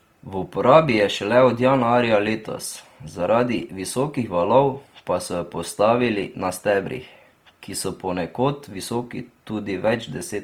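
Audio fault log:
Throughout, Opus compression: the speech keeps its full bandwidth, but the upper bands have a rough, grainy, noise-like texture. The likely cause is Opus in its music (CELT) mode, which keeps each band's energy but, short of bits, fills the finer detail by folding lower bands or injecting noise. That avoids holes and swirling but turns tonal detail granular, damage plainly audible at a rate around 24 kbps.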